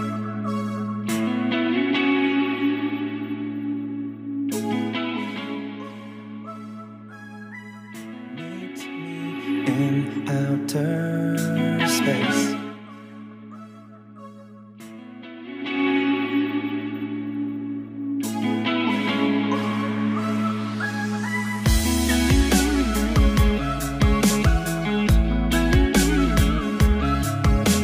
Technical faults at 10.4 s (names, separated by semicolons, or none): none